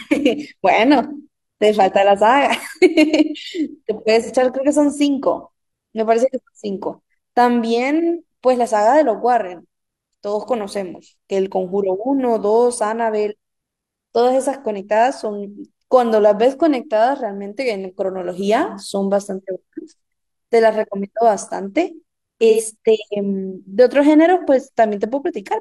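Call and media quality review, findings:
AAC frame loss with concealment, 4.22–4.30 s: brief smeared, phasey patch in the speech, about 43 ms, which fits one lost AAC frame. Decoder bridges the gap by repeating the last good spectrum with randomised phase.

AAC frame loss with concealment, 22.49–22.61 s: same smeared texture, longer, about 85 ms, consistent with two consecutive lost frames. Concealment holds the prior spectral envelope across the gap.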